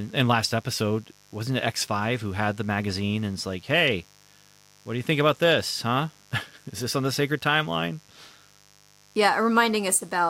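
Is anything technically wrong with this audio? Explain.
Yes. A mains buzz runs under the speech from start to finish. It is a steady, raspy buzz rather than a smooth hum, sitting about 30 dB below the speech. The cause is interference from the 50 Hz mains supply. Sharp switching spikes, such as those from a dimmer or rectifier, or pickup through a missing shield, arrive twice per cycle. Their harmonics stack up into the kilohertz range, which gives the buzz its edge.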